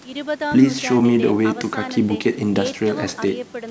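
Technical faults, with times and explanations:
No technical faults can be heard in this speech.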